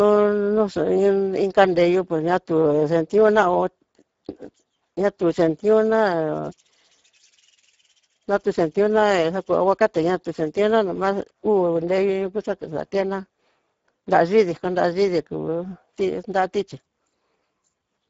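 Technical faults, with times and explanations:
Throughout, Speex codec: the speech runs through a CELP coder so short of bits that the excitation is only roughly modelled, which fits a bitrate near 10 kbps. The voice comes out hoarse and grainy, with plainly audible coding damage. Nothing is present above 7.7 kHz.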